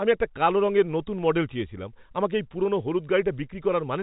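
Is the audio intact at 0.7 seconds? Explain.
Yes, the audio is intact at 0.7 seconds, with the speech passing cleanly through the G.711 telephone coding, which limits the sound to nothing above about 3.8 kHz.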